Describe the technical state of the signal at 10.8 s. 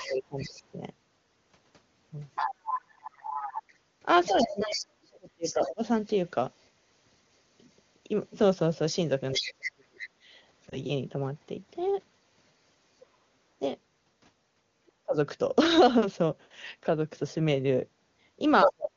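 Other side's voice leaking through runs from the start to 14.92 s, so it is present at 10.8 s: a second voice sits roughly 10 dB under the main speech, likely because the echo canceller left part of the far end's loudspeaker playback in the microphone signal. Lost AMR speech frames appear just before, from 10.69 to 10.78 s, where a single frame failed: the decoder filled the gap by repeating the last good pitch and vocal-tract settings at reduced gain, giving a brief dip or warble, with the sound rough for a moment afterwards within the otherwise clear 23.85 kbit/s wideband coding.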